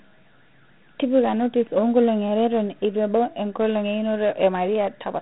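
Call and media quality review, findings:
Dialogic VOX ADPCM, whole clip. Band stops near 3.9 kHz, so speech sounds dull and phone-like. Plainly audible gritty hiss rides on the speech. Likely a 4-bit OKI ADPCM stage at 8 kHz sampling, which fits about 32 kbps. Coarse step adaptation adds the grain.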